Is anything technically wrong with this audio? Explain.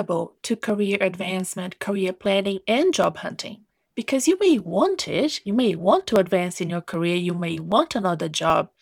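Yes. From 0.70 s to 8.5 s the speech carries a regular tick, about ten clicks spaced roughly every 0.78 s, heard as a brief discontinuity whenever the voice is present. This is the signature of clock drift buffer slips, likely from two devices running on separate clocks that disagree by something like a thousand parts per million. The buffer between them slowly drifts until a few dozen samples are dropped or repeated, producing each click.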